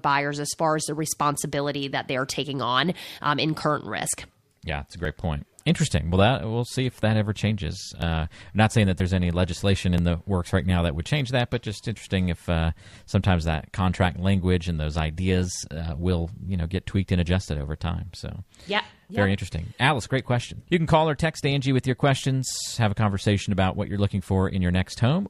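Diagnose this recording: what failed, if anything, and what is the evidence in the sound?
Speech playback from a segmented stream shows an overlap between stream segments, with tiny skips at 4.06, 5.05, 7.03, 8.02, 9.00 and 9.98 s, spaced on a one-second segment grid. The player trimmed duplicated time stamps from audio that wasn't actually doubled, deleting roughly 5 to 13 ms each time. On a waveform, each shows as an abrupt step discontinuity.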